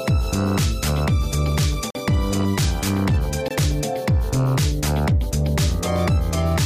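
Short holes at 1.90 s (about 46 ms) and 3.48 s (about 23 ms): blocks of digital silence, where buffers fitting 2048 and 1024 samples went unfilled and dropped straight to silence.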